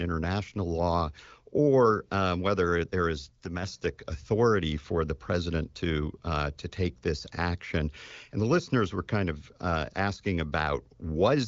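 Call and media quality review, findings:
Level dip, one channel drops out: 3.46–3.63 s, between "um whether there is" and "authority for the president"; again 10.16–10.21 s after "were kind of uh". Sudden drop of about 6 dB on the mono sum, likely one stereo leg lost momentarily. Waveform shows a flat-edged notch; the spectrogram dims evenly across the band, ending near 7.5 kHz (AMR-WB ceiling).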